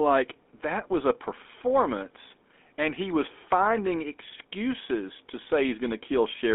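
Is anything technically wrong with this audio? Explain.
Yes. Throughout, the speech has plainly audible GSM full-rate codec damage. Regular-pulse vocal-tract coding, consistent with 13 kbps, gives a buzzy, gravelly roughness within a 250 Hz to 3.5 kHz band.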